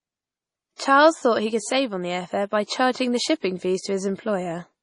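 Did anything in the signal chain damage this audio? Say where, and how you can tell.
Yes, at the codec stage: the speech carries heavy MP3 compression damage from start to finish. Nothing reaches above 10.5 kHz, a hard ceiling rather than a gentle roll-off, and s sounds turn watery and swirly as weak frequency lines flicker on and off between frames. That flicker tells it apart from a plain low-pass filter, which would dull the top without the swirl. The damage is heavy enough to fit a likely low bitrate around 32 kbps.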